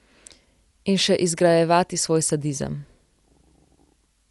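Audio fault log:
Throughout, Dolby Digital compression, likely the cause of a dull, band-limited sound with nothing above about 11.5 kHz and plainly audible codec damage on the speech. The encoder appears to have narrowed the band and left many frequency lines without mantissa bits, so the decoder fills them with dither noise, which fits a low bitrate around 64 kbps. That rough, fluttering noise clinging to tonal parts sets it apart from a plain low-pass filter.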